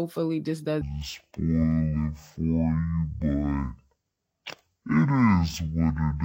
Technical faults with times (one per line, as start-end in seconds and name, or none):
0.81-6.25 stereo read as mono